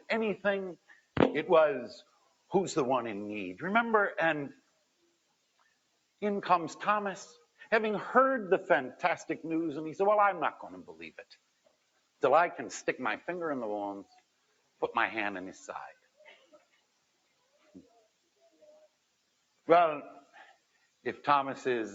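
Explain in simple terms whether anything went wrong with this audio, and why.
Yes, something went wrong. Noise suppressor applied to music or sounds, throughout the clip: a filter built to clean up voices on calls was left switched on. It mistakes steady tones, room ambience and echo for background noise and keeps pushing them down, so the level swings noticeably and the sound pumps, flutters and thins out, while sharp attacks still come through fairly intact.

Sound cut by the noise suppressor, at 0.76 to 1.16 s, 2.0 to 2.52 s, 4.52 to 6.22 s, 7.3 to 7.65 s, 10.87 to 12.22 s, 14.04 to 14.82 s, 15.92 to 19.67 s and 20.21 to 21.05 s: in these stretches the same filter judged the held or fading sound to be noise and turned it down hard, far below its surroundings. Lingering tails are clipped short or sink away. The longest dip lasts nearly four seconds from 15.92 s.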